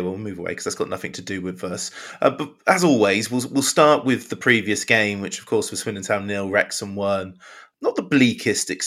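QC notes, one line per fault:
No technical faults were detected anywhere in the signal.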